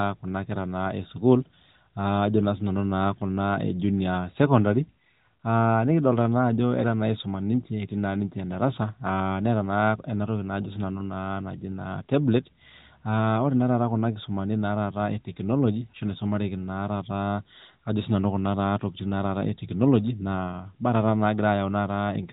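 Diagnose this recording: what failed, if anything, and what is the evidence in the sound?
Nothing in the recording has failed: the speech is limited to the 4 kHz band of the AMR narrowband mobile codec, with only the light coding colouration expected of its top 12.2 kbps mode, and no stage from the wiring through to playback leaves an audible fault.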